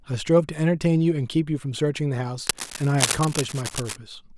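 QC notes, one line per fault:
2.47–3.97 s, cable scratch noise: likely a worn cable or connector being moved, its contact resistance shifting rapidly and injecting dense, uneven bursts of noise, heard as a scratchy rustle only a little quieter than the speech for about a second and a half.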